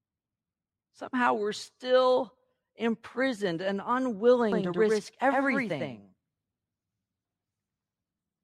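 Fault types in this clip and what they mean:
Doubled audio track: from 4.52 s to the end, the speech is heard twice, a second full-band copy trailing about a tenth of a second behind and roughly as loud as the first. It cuts in abruptly, with no fade, and carries no reverberant tail or room colouring, so it reads as a clean slapback rather than an echo. The likely cause is a second, slower capture path or an edit leaving two copies misaligned.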